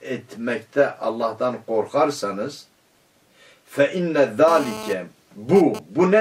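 From 4.48 to 5.79 s a GSM phone buzz appears: a 2G handset's transmit bursts, repeating at 217 Hz, are rectified by the audio circuitry into a raspy buzz about 12 dB below the signal. Unlike smooth mains hum, it is harmonic-rich and comes and goes.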